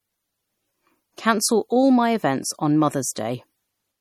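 Across the whole clip the speech has the smeared, watery artefacts of heavy MP3 compression, though the spectrum reaches about 19.8 kHz. That's low-bitrate audio saved at a high bitrate, likely a 48 kbit/s MP3 re-encoded at 320 kbit/s, which kept the damage without repairing it.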